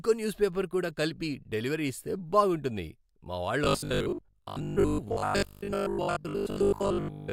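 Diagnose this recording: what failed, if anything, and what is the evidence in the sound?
From 3.64 s to 7.32 s the speech turns into a rigid, metallic buzz at 50 Hz that still roughly tracks the syllables, which is robotic sound from repeated short buffers. The likely cause is at the driver or buffer stage: audio arrives too seldom, so a 20 ms block is replayed in place of most of the real signal. Unlike 50 Hz mains hum, this buzz rises and falls with the speech instead of running steadily underneath it.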